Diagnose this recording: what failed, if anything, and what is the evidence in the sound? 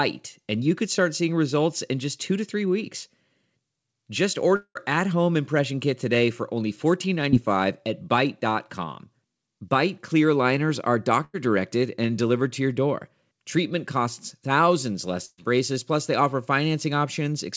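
Network stage, a long network dropout. At 4.56 s the speech stops being fresh and turns into a fading continuation of the last sound. That fill runs for roughly 190 ms. The last 60 ms is silence. Speech returns at 4.77 s on "at home impression kit", with about 200 ms never heard. The likely cause is a stall in packet arrival, so the receiver extended what it had and then gave up.

Network stage, a short concealed packet loss at 7.31 to 7.34 s. It is a brief smear. About 20 ms of audio never reached the decoder in time. The receiver filled the hole by extending the preceding sound and then blended back into real speech. The patch is short, so it passes quickly.

Network stage, a burst of packet loss, twice. At 11.24 to 11.35 s, after "clear liners are", a held, fading tail replaces about 80 ms of speech. Speech resumes on "directed and delivered to". At 15.25 to 15.40 s, after "costs thousands", about 120 ms goes missing. 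A fading fill ends in 20 ms of silence before "braces plus they offer". Consecutive packets were lost or came too late to play. The concealment decayed, and speech resumed further on. The band stops at 8 kHz, which fits G.722 at 64 kbps.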